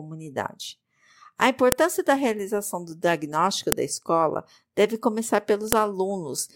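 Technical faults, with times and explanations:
1.72 s, 3.72 s, 5.72 s: file header played as audio. Sharp, loud clicks recur every 2.0 s, regardless of the speech around them, where separate WAV pieces were joined without stripping their headers. Those few dozen header bytes are played back as sample values, giving a brief snap at each joint.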